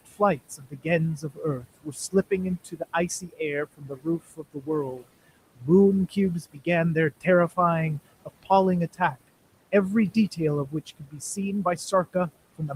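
Noise suppressor artifacts run through the whole recording. The suppressor pulls down whatever it classifies as steady background by about 21 dB, deciding band by band on each short frame. The room noise, which sits about 17 dB below the speech, therefore drops away in the pauses and comes back underneath the talking.

Speech cut by the noise suppressor happens in three stretches. From 0.06 to 7.58 s, roughly two seconds in total are turned down, by as much as about 22 dB. From 8.25 to 9.17 s, a brief portion of around a fifth of a second drops by up to about 17 dB. From 9.72 to 12.76 s, cuts reach about 20 dB. In each case quiet speech energy was treated as noise and attenuated along with the background, so soft consonants and word endings sound clipped, swallowed or faded.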